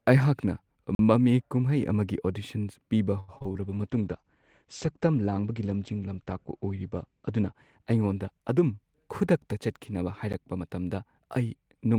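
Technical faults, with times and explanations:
0.95 to 0.99 s, block of digital silence: the audio drops straight to silence for about 43 ms and comes back with no fade, so it is heard as a short hole. That length fits a 2048-sample buffer the program didn't fill in time.
3.20 to 3.56 s, repeated packet loss (robotic sound): four holes land close together, the longest about 83 ms. Each one gets patched by stretching the last bit of sound, and roughly 40% of the stretch is that concealment, so the speech goes choppy with pieces missing.
3.61 to 9.27 s, call bitrate drop: the encoder gets squeezed from 32 kbps down to 12 kbps and sits at the bottom for about 3.6 s. At that rate Opus codes more coarsely and pulls the audio bandwidth in from 20 kHz to 8 kHz, so the speech turns muffled and rough until the rate climbs back.
10.33 s, block of digital silence: a much shorter dropout, about 11 ms of silence with hard edges, so it comes across as a single tick rather than a gap. 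The length fits a 512-sample buffer that wasn't filled in time.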